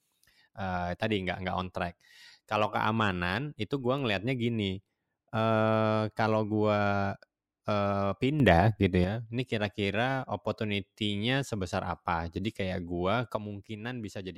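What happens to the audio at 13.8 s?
At 13.8 s the audio is inside a sudden gain jump running from 13.36 s to the end of the clip. The level drops by about 7 dB between adjacent samples, speech and background noise together, likely from a digital gain change applied without a ramp.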